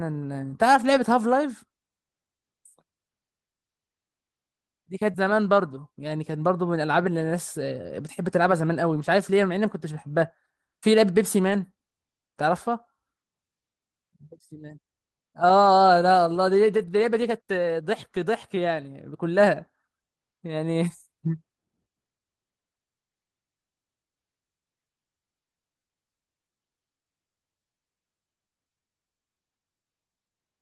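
From 0.81 to 0.95 s, lost packets rebuilt from error correction: the decoder played the low-bitrate copies carried in the following packets, so there is no gap, but about 80 ms of the speech turns rougher and noisier. On a spectrogram the harmonics blur into a grainier texture.

At 5.11 to 5.16 s, a short concealed packet loss: about 20 ms never arrived and was filled by extending the preceding sound, heard as a brief smear or wobble. The filled stretch then blends back into the real audio. The final 20 ms of that stretch, 5.14 to 5.16 s, was recovered from error correction.

The same rebuilt-from-error-correction roughness returns at 8.94 to 9.04 s (about 60 ms), 11.50 to 11.64 s (about 80 ms), 15.62 to 15.68 s (about 40 ms) and 16.78 to 16.88 s (about 60 ms). Each shows the same noisier, smudged spectral patch without any dropout in the waveform.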